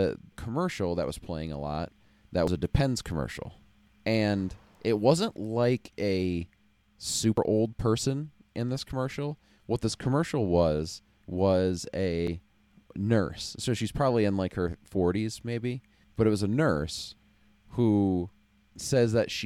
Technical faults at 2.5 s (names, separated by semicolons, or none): audio missing between chunks